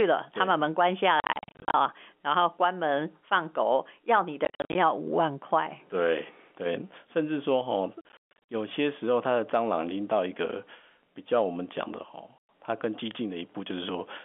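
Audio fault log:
1.2–1.74 s, 4.45–4.75 s, 8.01–8.37 s and 12.38–12.49 s, packet loss filled with silence: the speech drops into dead silence with hard edges. The first three are scattered clusters of holes, with the longest runs at 40, 50 and 140 ms. The last is a single 110 ms gap. Gap lengths fall in steps that fit 10 ms packets. Unlike concealed loss, nothing is repeated or faded, and the telephone-band G.711 sound stays intact between holes.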